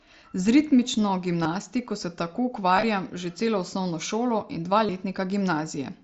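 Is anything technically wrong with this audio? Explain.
Yes. At 1.43 s, around 2.76 to 2.83 s, and at 4.86 s there are brief buzzy, held-tone patches with a slight warble as normal sound resumes. This is concealed Bluetooth headset packet loss: lost headset packets were patched by repeating the best-matching recent waveform, about 22.5 ms in total at each of the first and last events, with shorter gaps scattered across the middle event. It passes through the wideband mSBC headset link.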